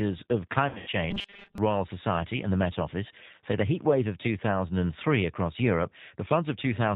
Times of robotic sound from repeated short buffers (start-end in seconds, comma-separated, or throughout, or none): 1.11-1.58